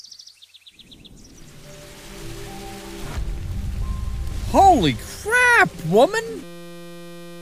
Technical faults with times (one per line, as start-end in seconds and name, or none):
6.43-7.42 system hang loop